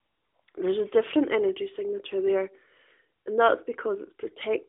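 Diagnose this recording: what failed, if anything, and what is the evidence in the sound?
Nothing failed in this recording.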